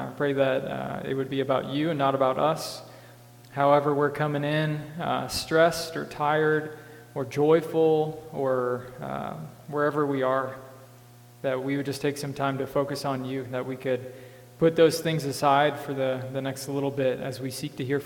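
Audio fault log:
No technical faults are audible anywhere in the recording.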